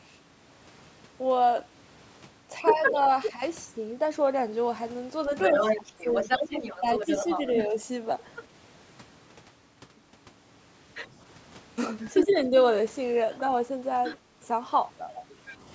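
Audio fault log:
2.65–3.32 s, 5.42–8.44 s and 9.98–15.56 s: other side's voice leaking through. The echo canceller likely left part of the far-end loudspeaker signal in the microphone feed, so a second voice rides under the talker: about as loud in the first stretch, somewhat quieter in the second, and faint in the last.
2.73–2.96 s, 5.77–7.77 s and 12.25–12.54 s: speech suppressed in double talk. With both sides talking at once, the canceller likely mistook the talker for echo and turned the microphone down, so the voice dips by about 5 dB in brief patches within each stretch.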